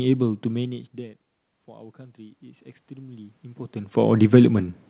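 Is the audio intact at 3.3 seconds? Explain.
No. At 3.3 s the automatic gain rising that runs from 0.51 to 4.03 s is still under way. The level at the microphone fell by about 23 dB when the talker moved back around half a second in, so the gain control judged the input too quiet and began raising its gain slowly. By 4.03 s it has added about 9 dB, and at 3.3 s the voice and the room noise behind it are still swelling upward together.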